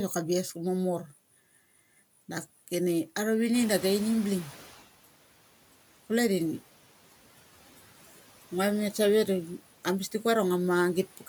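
Noise suppressor catching up, from 3.53 to 4.83 s: the room noise jumps by about 21 dB at around three and a half seconds, and the suppressor is still working from its quieter noise estimate. For the first moments the new noise passes through with little reduction, sitting clearly behind the speech. Over about 1.3 s the estimate catches up and the noise sinks by about 9 dB, an audible settling rather than a steady floor.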